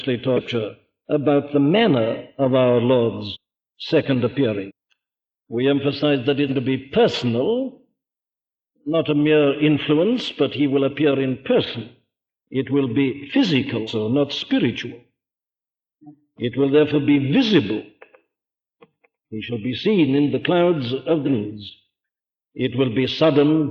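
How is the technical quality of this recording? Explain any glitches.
The recording has three audible dropouts in quick succession. At 3.32–3.37 s, 4.67–4.72 s and 6.48–6.51 s the sound lurches forward past a missing stretch of roughly 0.2 s, 0.3 s and 0.2 s. These are compressed frames skipped: whole coded frames, each 46.4 ms long, were never played, so the audio jumps ahead by several frame lengths.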